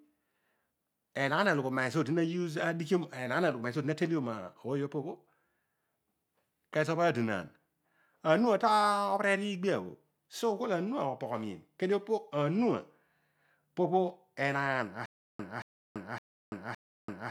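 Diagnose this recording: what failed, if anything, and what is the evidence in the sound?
The speech runs cleanly until 15.06 s, then breaks into a stutter with silent gaps that carries on to the end. A 226 ms fragment keeps coming back, each time followed by about 337 ms of dead digital silence, so it cycles every 563 ms, four repeats in all. That's the signature of a stalled player or stream, likely at the playback buffer: each retry replays the last fragment and then runs dry, and the real audio from that stretch is gone.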